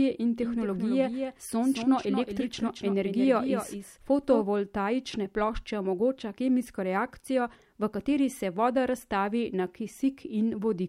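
A slower second capture path likely fed in a doubled audio track from 0.41 to 4.43 s: a dry copy trails about 200 ms behind, somewhat quieter.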